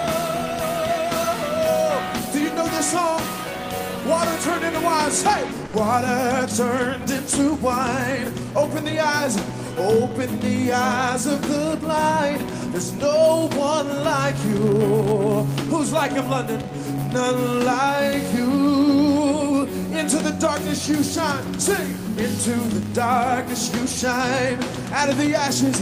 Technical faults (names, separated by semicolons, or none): filter restarted on every block; sound dropped by the voice detector